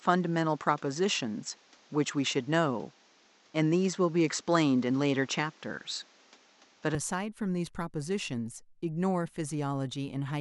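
From the start until 6.95 s the speech is band-limited, with nothing above 7.9 kHz, and carries its own faint background noise sitting well below the signal. At 6.95 s it abruptly clears up with no gap, and the level shifts by a few decibels. This is most likely an input switched to a poorer device mid-recording. A spectrogram shows a hard ceiling at 7.9 kHz that lifts at 6.95 s, and the waveform shows a step in level at that moment.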